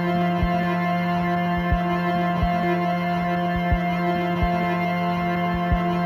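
Throughout the music, imaging from linear upsampling. The band dulls near 8 kHz, and faint mirror images, roughly 40 dB down, fill 8 to 16 kHz as metallic shimmer. This fits 16 kHz audio raised to 48 kHz by straight-line interpolation.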